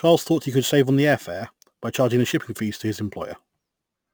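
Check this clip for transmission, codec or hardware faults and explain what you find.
One fault runs through the whole speech: a bright, metallic fizz that rises and falls with the voice, about 23 dB below it, with the lowest copy sitting between roughly 11.0 and 22.05 kHz. This is imaging from sample-and-hold upsampling. The images fit a source near 22 kHz raised to 48 kHz by repeating each sample without a smoothing filter, so mirrored copies of the spectrum sit above the original band.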